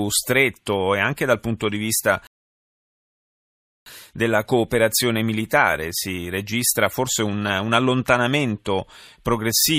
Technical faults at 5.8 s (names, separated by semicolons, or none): none